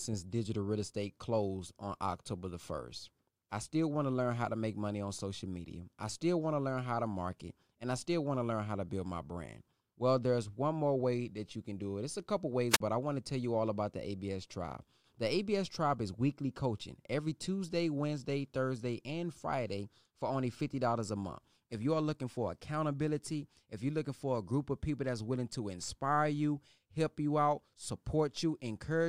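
Speech, with one wireless microphone squelch dropout between 12.70 and 12.80 s, after "a couple" and before "I want to tell": a short burst of hiss, then a gap of near silence of about 39 ms. The radio signal from the analogue FM microphone faded, and the receiver's squelch muted the output.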